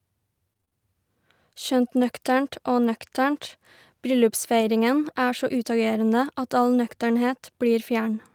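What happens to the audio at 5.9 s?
Nothing goes wrong at 5.9 s; the speech carries on intact through that moment, with no dropout, click or distortion to be heard.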